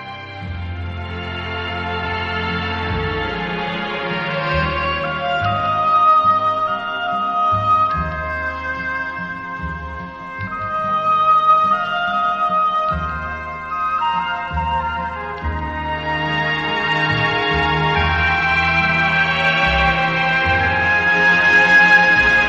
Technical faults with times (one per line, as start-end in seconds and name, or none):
0.00-22.49 doubled audio track